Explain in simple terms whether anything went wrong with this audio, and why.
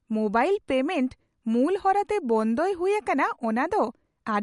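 Something did go wrong, and it runs through the whole speech clip, start to finish. The speech has a dull, plainly watery quality, and there's nothing at all above about 11.2 kHz, so the crisp top end is simply gone. That's MP3 compression damage, most likely from being squeezed too hard. With too little data to work with, the encoder chops off the treble and drops quieter detail, which flickers in and out and leaves that smeared sound.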